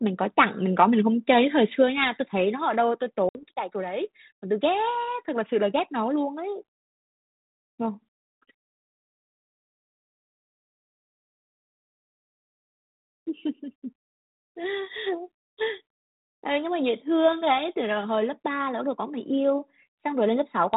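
At 1.02 s the speech and background drop together by about 2 dB in one step, likely the microphone volume stepped down; the waveform envelope shrinks abruptly and stays smaller. From 3.29 to 3.39 s, packet loss on an ADPCM call cuts a sharp-edged silent gap of about 60 ms, a blank column on the spectrogram under the G.726 link's 4 kHz ceiling. The decoder's predictor then restarts out of step, so the speech returns slightly distorted.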